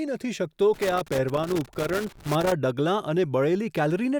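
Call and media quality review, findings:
Loose connector crackle, 0.74 to 2.52 s, about 1.8 s. Irregular crackle and scratching over the speech. Probable component: a worn or dirty cable connector or jack. The contact opens and closes as it moves, chopping the signal, and any DC on the line turns each break into a pop. Reseat or replace the connector.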